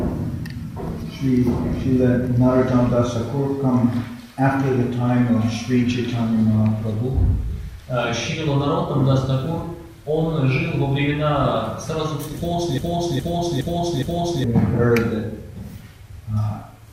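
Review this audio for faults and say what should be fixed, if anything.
A stalled player, encoder or stream likely kept resending the last fragment it held, causing a broken-record loop from 12.78 to 14.44 s. A 0.41 s piece repeats exactly four times back to back, and the audio that belonged there is lost. Handling stalls by inserting silence or concealing the gap, rather than replaying stale buffered data, would prevent this.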